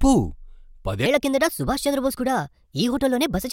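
From about 1.06 s to the end, the speech jumps into a section at the wrong speed: it runs 1.26 times faster than it should, so everything turns quicker and higher at once, up by roughly four semitones, giving that hurried, chipmunky edge. Pitch and pace shifting together like that means the stretch was most likely played or edited against the wrong clock rate rather than deliberately sped up.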